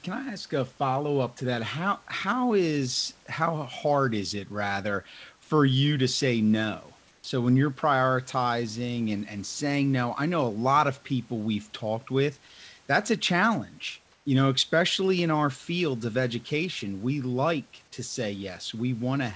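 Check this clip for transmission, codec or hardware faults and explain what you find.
Two brief gaps in the speech sound wrong. At 7.08 s, for 160 ms between "you to say no" and "when you're prioritizing and", and at 14.12 s, for 140 ms just after "with that's a challenge", the faint room background, sitting around 37 to 38 dB below the loudest speech, turns into a smooth, featureless hiss about 1 dB quieter. This is comfort noise in place of the background, likely from discontinuous transmission: the sender stopped sending during the pause and the receiver generated shaped synthetic noise. The call path carries nothing above 8 kHz, consistent with a wideband codec such as G.722.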